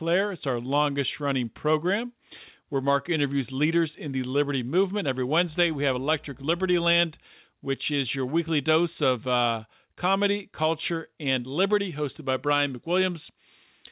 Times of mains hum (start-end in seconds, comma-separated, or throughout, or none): 5.48-6.98